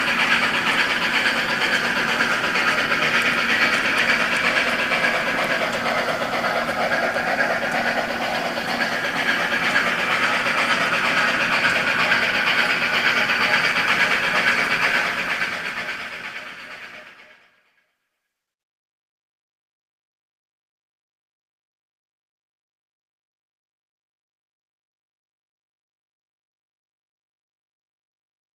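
Nothing in the recording stands out as a technical problem; it all sounds fine.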